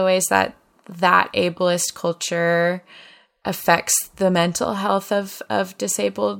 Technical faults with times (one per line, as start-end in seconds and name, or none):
none